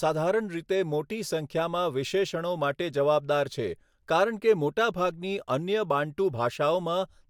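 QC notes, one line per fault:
No technical faults are detected anywhere in the speech signal.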